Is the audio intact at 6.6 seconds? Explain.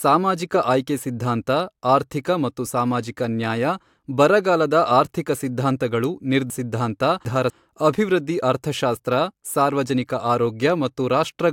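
No. From 6.5 to 7.5 s, after "ಬರಗಾಲದ ಆರ್ಥಿಕ ಸಿದ್ಧಾಂತಗಳು", there are chunks out of order: one 250 ms block plays three blocks late, giving a jumbled stretch with three hard joins before "ಅಭಿವೃದ್ಧಿ ಅರ್ಥಶಾಸ್ತ್ರ ಸಾರ್ವಜನಿಕ". Unlike a dropout, no sound is missing or silent, only misplaced.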